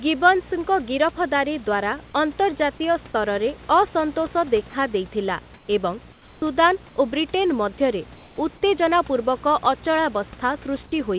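Speech with a video or display buzz throughout at the 59.94 Hz field rate, about 20 dB below the signal, plus a 15.7 kHz line tone. A spectrogram shows stacked harmonic lines and a thin high stripe. At 5.54–5.68 s, 6.12–6.42 s and 8.16–8.38 s, comfort noise replaces the background: the room ambience turns into a flat, detail-free hiss about 3 dB quieter, likely from discontinuous transmission. These patches appear as smooth, uniform texture on the spectrogram and a slight dip in the waveform's noise floor, inside a call band that stops at 4 kHz.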